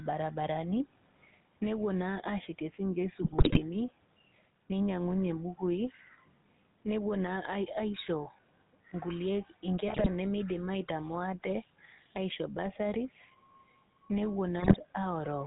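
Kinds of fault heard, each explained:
Gain pumping: The quiet room noise, about 44 dB below the speech, is part of the recording; the gain swings by roughly 5 dB, pulled down under each loud stretch, likely a fast limiter working against excessive input gain. On a spectrogram and waveform the envelope looks flattened.
GSM full-rate codec: The speech has a buzzy, gravelly roughness throughout, the sound of pulse-excited vocal-tract modelling at a rate that fits 13 kbps. A spectrogram shows nothing above 4 kHz and smeared, coarse harmonics.
GSM bit errors: Corrupted decoder parameters produce brief squawks, pops and gargling at 3.22–3.63 s, 9.88–10.08 s and 14.59–14.77 s, consistent with a bit error rate of around 2%. Spectrograms show sudden distorted spectral blotches there; the waveform shows abrupt level spikes.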